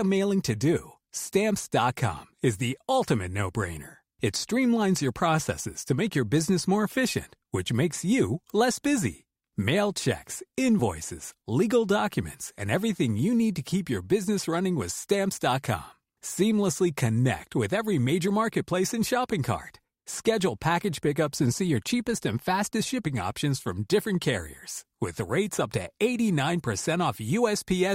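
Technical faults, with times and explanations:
10.79–10.82 s, 12.59–12.64 s, 18.27 s and 25.29 s, compressed frames skipped: whole 20 ms frames never reached playback, about one each time but two at 12.6 s between "legal documents" and "everything you need to". The skip at 18.27 s comes after "connect with every", and the one at 25.29 s comes before "up to". Each time the sound jumps ahead by the length of the missing frames.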